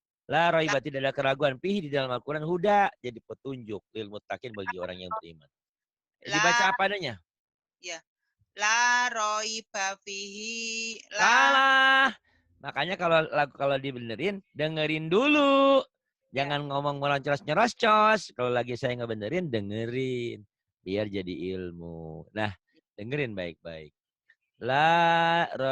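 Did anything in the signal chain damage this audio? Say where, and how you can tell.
Yes. The damage is at the network and codec stage: an adaptive stream starting at a low bitrate. From 0.0 to 4.0 s the treble is thin and partly synthetic, and codec artefacts are stronger. At 4.0 s the quality jumps up with no gap or dropout. The player began on a lean rendition to start quickly, then switched up once it had measured the connection. The sound fits Opus near 16 kbit/s stepping up to about 64 kbit/s.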